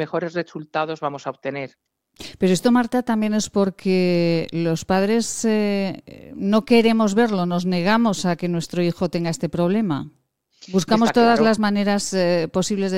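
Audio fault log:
No faults heard.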